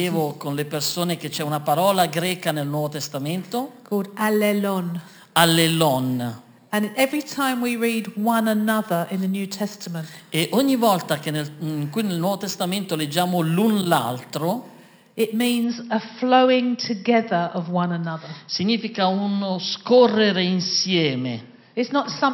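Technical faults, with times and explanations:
0.0–15.64 s, imaging from sample-and-hold upsampling: the audio was raised to a higher rate by holding each sample for several output samples, with no smoothing filter, from a rate that points to 12 kHz. The missing filter leaves mirrored copies of the spectrum, the lowest between 6 and 12 kHz at about -16 dB relative to the sound. They are heard as a bright, metallic fizz that rises and falls with the level and moves opposite to the pitch.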